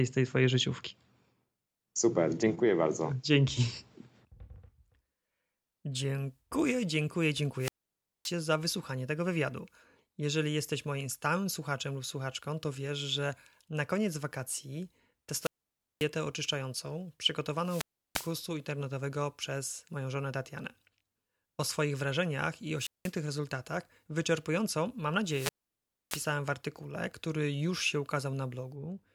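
Wireless microphone squelch dropouts at 7.57–8.34, 15.39–16.07, 17.60–18.37, 22.77–23.14 and 25.24–26.33 s: each time the radio signal fades, hiss rises and the receiver squelch mutes the speech, for 0.19 to 0.62 s.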